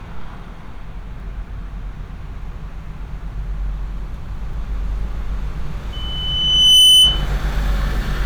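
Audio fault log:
5.92–7.28 s, loudspeaker feedback squeal: a pure tone at 3 kHz emerges and swells over roughly a second until it sits about 10 dB above the rest of the audio. A microphone was picking up the loudspeaker it was driving, and at 3 kHz the round-trip gain exceeded one, so each pass through the loop reinforced that single frequency until it became a piercing squeal.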